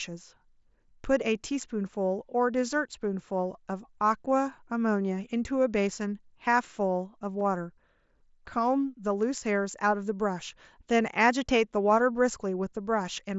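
Speech, carried over a wideband mSBC Bluetooth headset link, with one brief glitch at about 7.40 s. That's concealed Bluetooth headset packet loss: roughly 15 ms went missing, which fits a couple of dropped packets, and the receiver filled the gap by repeating the closest-matching bit of recent waveform, so it comes through as a brief buzzy blip.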